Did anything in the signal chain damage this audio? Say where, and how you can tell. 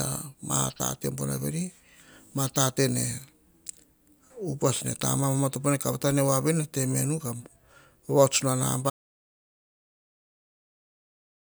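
Yes. An audio dropout to silence begins at 8.9 s and runs to the end of the speech at about 11.4 s. The voice stops mid-flow and the remaining stretch is silent, with no room tone or noise floor underneath. That points to the input being lost before the converter or encoder, likely a disconnected device, failed link or accidental mute, while recording carried on writing empty samples. Whatever followed is unrecoverable.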